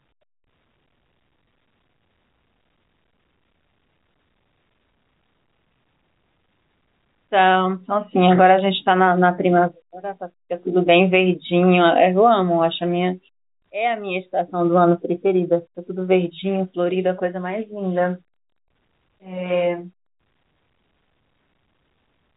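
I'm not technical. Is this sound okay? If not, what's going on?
Yes, nothing in this speech recording is wrong. It sounds like an ordinary phone call because it went through standard G.711 telephone coding, which cuts off everything above about 3.8 kHz and leaves the sound narrow and muffled.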